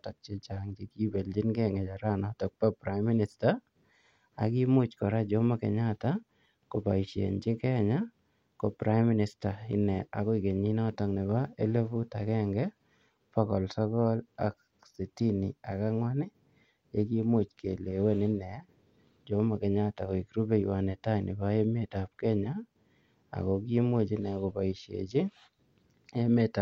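No technical faults can be heard anywhere in the recording.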